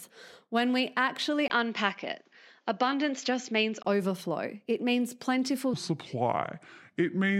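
From 1.48 s, just after "when we actually", the recording likely switched its input to a poorer device. A 20 ms gap marks the switch, then a narrower band comes through, so the speech turns dull and boxy, with faint new background noise and no change in level, until 3.85 s.

After "means plentiful", at 5.74 s, a section at the wrong speed begins, likely from playback against the wrong clock. It runs at 0.724 times its recorded speed to the end, dropping pitch by roughly five semitones, so the speech sounds deep, dragged and slow.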